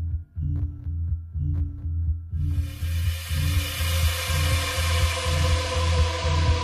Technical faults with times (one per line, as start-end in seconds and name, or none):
none